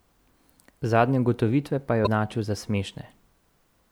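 Right after "ugotovitve pa", from about 2.03 to 2.07 s, there's a short glitch from damaged data in the compressed stream. Some of the data there is wrong, so the decoder misreads those frames and loses sync while it hunts for the next valid frame header.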